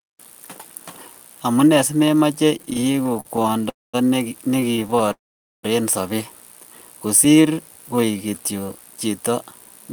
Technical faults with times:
2.57-3.67 repeated stalls (stutter)
3.69-3.95 call audio freeze
4.57-5.12 repeated stalls (stutter)
5.12-5.65 call audio freeze
7.08-7.55 jitter buffer slow-down
7.95-8.31 jitter buffer slow-down

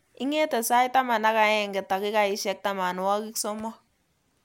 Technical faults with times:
none

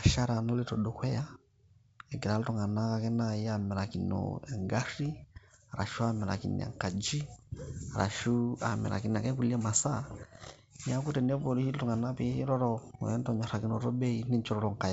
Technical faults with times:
none

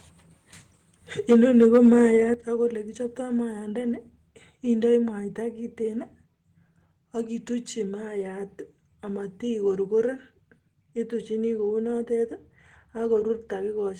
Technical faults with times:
1.30-1.97 microphone overload
1.33 microphone volume stepped down
2.34 microphone volume stepped down

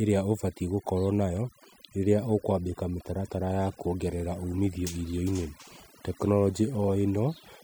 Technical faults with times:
0.00-7.63 overdone noise removal

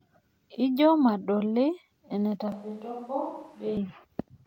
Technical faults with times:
2.52-3.77 switch to a distant microphone

